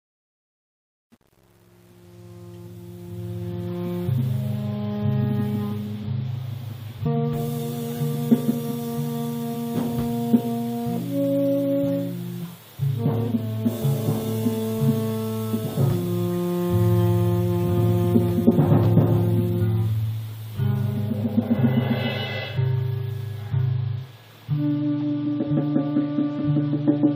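From the start to 3.91 s the audio fades in, and that fade carries truncation distortion: the gain stage keeps too few bits and adds no dither, which fits roughly a 9-bit word length. While the level sits near the smallest steps, from 0 to 3.42 s, the waveform collapses into coarse square steps, so the quiet opening sounds gritty. The rougher texture clears as the fade approaches full level at 3.91 s.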